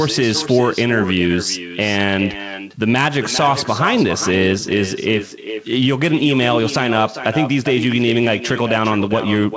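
Throughout the speech, echo with no canceller returns each phrase roughly 0.4 s later, about 10 dB quieter, as delayed ghost copies in the waveform and spectrogram.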